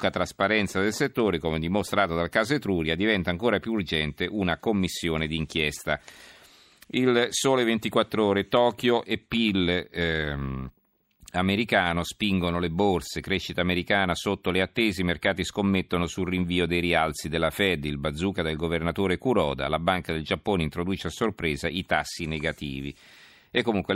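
At 6.57 s, just after "urgente una commissione d'inchiesta", chunks out of order: a 5.33 ms chunk plays one chunk late, giving a brief jumbled moment with hard joins.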